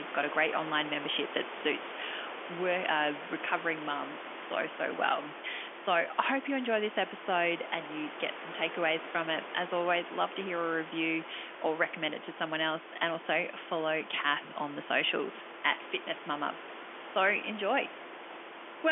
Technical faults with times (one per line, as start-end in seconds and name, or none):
none